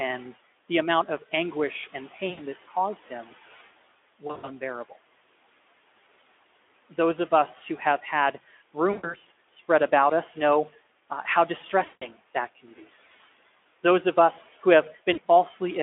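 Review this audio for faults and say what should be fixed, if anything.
VoIP packet loss concealed by the speech codec occurs at 2.29–2.40 s, 4.27–4.50 s, 8.91–9.17 s, 11.85–12.16 s and 15.13–15.18 s. In each gap the Speex decoder stretches the last pitch and filter shape into a buzzy tone or a coloured noise that fades, dropping the level frame by frame. The losses total about 40 to 160 ms each, fitting 20 ms frames, and the voice stays weak briefly after packets resume. A jitter buffer with forward error correction or redundant packets would prevent it.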